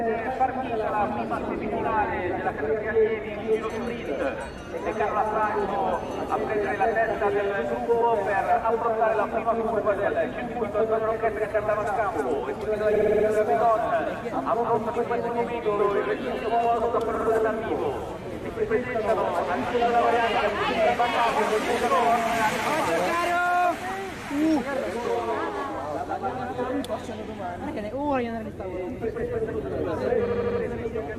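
At 12.95 s, 17.15 s and 30.27 s the sound stutters. These are repeated frames. A compressed block was sent again, so 60 ms, 60 ms, then 80 ms replays five, two and four times. The clip grows by 0.74 s.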